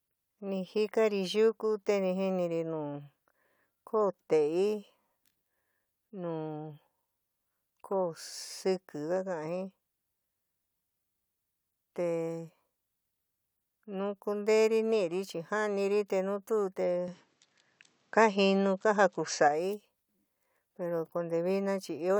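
A speech recording in which, from 17.08 to 19.48 s, the sound turns duller with no gap, likely an input switched to a poorer device: the spectrogram shows everything above 7.9 kHz cut off, the waveform steps about 5 dB in level, and a new noise floor sits about 50 dB down.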